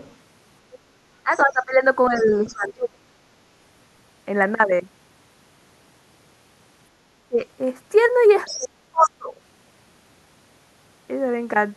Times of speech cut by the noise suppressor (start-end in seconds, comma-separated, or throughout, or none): none